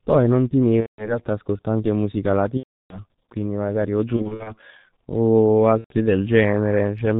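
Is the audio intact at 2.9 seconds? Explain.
No. From 2.57 to 3.00 s, right after "ascolto anche musica", VoIP packet loss concealed by the speech codec holds the last pitch and filter and ramps the gain down, turning the speech into a fading buzzy tone or coloured noise. This fits roughly 330 ms of lost 30 ms frames. The whole clip also passes through the G.723.1 codec at 6.3 kbit/s, so the speech sounds muffled and hoarse and its consonants are blurred.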